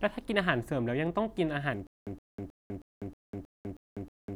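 From 1.87 s to the end comes a stutter with silent gaps: a 117 ms fragment repeats eight times, each followed by 199 ms of digital silence. A stalled stream likely replayed its last fragment. Unlike a gapless loop, the even gaps mark each failed retry.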